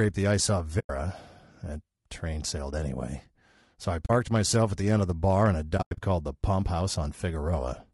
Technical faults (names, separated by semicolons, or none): low-delay AAC compression; AAC frame loss with muting